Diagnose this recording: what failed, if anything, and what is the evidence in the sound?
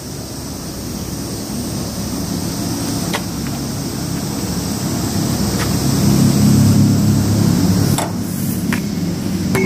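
Nothing in the recording points to a failure at any stage of the chain. No event in the sound calls for a diagnosis, so there is no evidence or mechanism to report.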